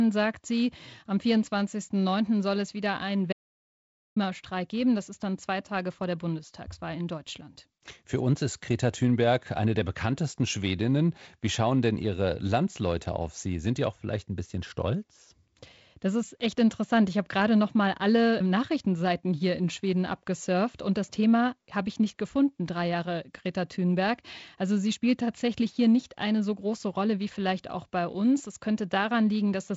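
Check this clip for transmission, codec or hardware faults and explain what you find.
One fault stands out in the speech, heard through band-limited G.722 wideband coding. From 3.33 to 4.16 s, just after "soll es wieder einen", an audio dropout to silence cuts about 0.84 s to silence, likely from a lost input link.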